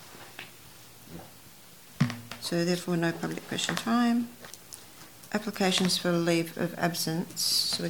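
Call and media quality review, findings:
No audible faults found.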